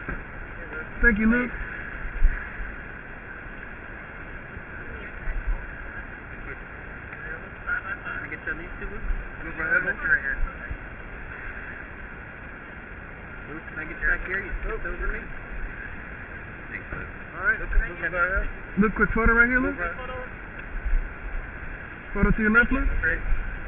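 Nothing goes wrong anywhere in the clip, so there are no technical faults to walk through.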